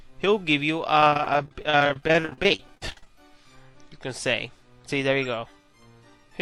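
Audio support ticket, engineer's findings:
Repeated packet loss (robotic sound), 1.00–3.07 s. Choppy, fragments missing. Many short gaps, longest 43 ms, roughly a third of the span concealed by extending preceding sound. Probable component: network transport and jitter buffer, with concealment masking holes.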